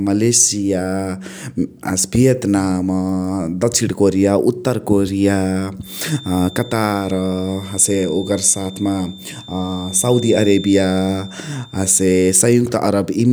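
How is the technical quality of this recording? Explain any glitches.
The recording carries one clear fault, a feedback whistle running from 5.78 s to 12.44 s. A thin, steady tone at 3.6 kHz sits about 20 dB under the speech and swells and fades slowly in level. The likely cause is a loudspeaker-to-microphone loop held just at the edge of feedback, so one frequency keeps ringing without building up. On a spectrogram it appears as a narrow horizontal line at 3.6 kHz across those seconds. In the waveform it is largely hidden under the speech.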